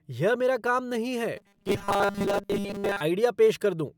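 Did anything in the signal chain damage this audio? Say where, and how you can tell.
Yes. From 1.37 to 3.01 s the speech turns into a rigid, metallic buzz at a fixed 200 Hz, the robotic sound from repeated short buffers, which most likely arises at the driver or buffer stage. A 200 Hz buzz means a 5 ms chunk looping whenever fresh audio failed to arrive, so most of the real signal in that stretch was skipped. On a waveform, identical 5 ms cycles repeat; a spectrogram shows rigid harmonics on 200 Hz in place of natural pitch movement.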